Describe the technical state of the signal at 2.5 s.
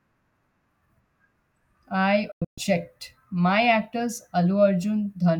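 That lands inside a digital broadcast dropout from 2.32 to 2.59 s: the receiver lost good frames and muted, leaving quick-faded holes, the longest 128 ms.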